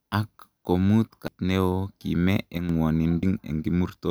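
At 1.28 s and again at 3.23 s, damaged data in the compressed stream makes the decoder lose sync and search for the next frame header. Each shows as a narrow vertical smear on the spectrogram. Between 2.58 and 2.69 s, a sudden gain jump drops sound and background together by about 6 dB, a step-shaped notch in the waveform envelope, likely from gain applied without a ramp.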